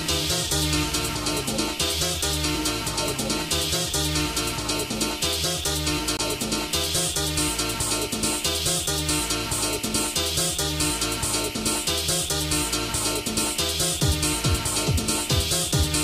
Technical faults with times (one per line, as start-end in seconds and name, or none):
6.17 CD skip